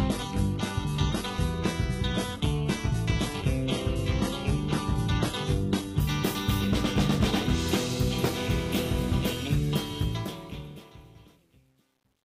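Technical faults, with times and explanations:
0.0–6.0 s, adaptive stream starting at a low bitrate: thin, swirly sound with nothing above 11.8 kHz, like a 16 kbit/s HE-AAC start, then a clean jump to roughly 96 kbit/s AAC-LC.
9.99–12.25 s, truncation distortion on a fade: in the fade-out from about 10 s, a stage that fits 10-bit truncation without dither leaves it gritty, worst from 10.76 s.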